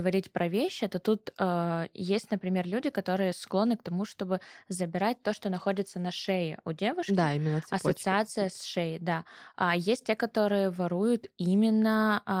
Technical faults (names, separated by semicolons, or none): none